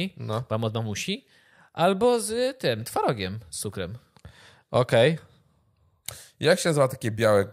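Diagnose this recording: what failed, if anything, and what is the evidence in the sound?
Nothing stood out on listening to this speech recording that would point to a failure at any stage of the chain.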